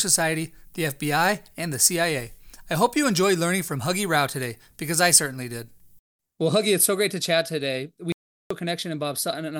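At 8.12 s, right after "great to chat today", the input feed was likely cut off for a moment, by a disconnected device, a failed link or an accidental mute, while the recorder kept writing silence. The result is an audio dropout to silence lasting until 8.51 s, roughly 0.38 s. The speech stops abruptly in mid-flow, the room tone disappears with it into silence, and whatever was said in that gap is gone.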